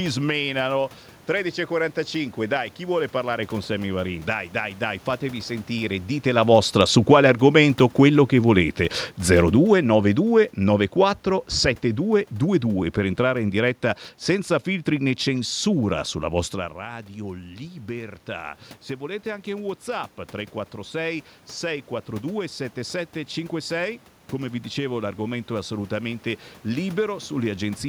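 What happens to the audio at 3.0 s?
At 3.0 s the speech carries on intact, with only the room noise of the recording space underneath it.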